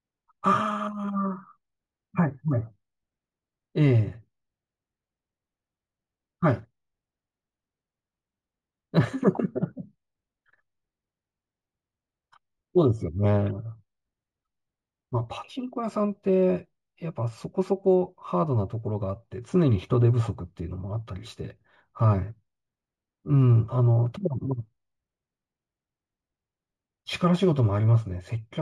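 Throughout the speech, sibilants carry a faint metallic shimmer over dulled highs. This is imaging from linear upsampling, which fits a 16 kHz source raised to 44.1 kHz by straight-line interpolation: weak filtering leaves mirrored spectrum between 8 and 16 kHz, roughly 45 dB down.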